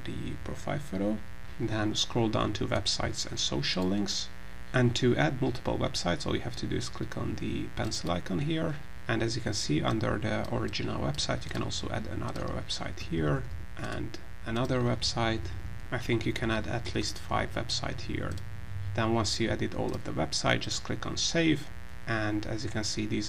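Switching spikes from a 60 Hz mains supply leak into the audio path, laying a steady, raspy mains buzz under the whole recording, roughly 20 dB below the signal.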